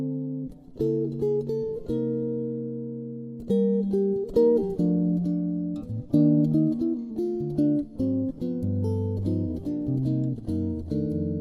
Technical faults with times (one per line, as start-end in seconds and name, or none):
7.02-7.10 AAC frame loss with concealment